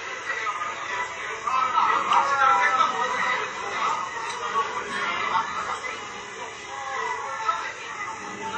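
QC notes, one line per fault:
Throughout, WMA compression: the audio rings and smears, with a hiss that swells and fades with the sound and nothing above 8.7 kHz. This is likely a low-bitrate transform codec spreading coarse quantisation noise across long blocks and zeroing weaker components, which fits roughly 32 kbps.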